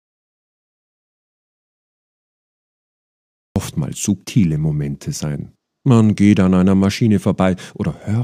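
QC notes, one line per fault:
0.00 to 3.56 s, audio dropout to silence: the clip opens in silence with no room tone. The input was likely lost while recording continued.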